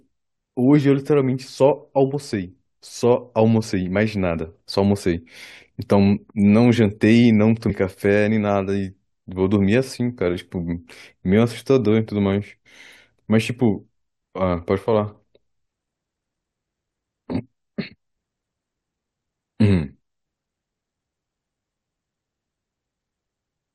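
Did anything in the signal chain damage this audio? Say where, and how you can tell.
Yes. Damaged data in a compressed stream at 7.69 s, at the codec stage of storage or playback: a brief blip cuts into the speech. Corrupted bytes make the decoder misread the frame there and lose sync until it finds the next valid frame header.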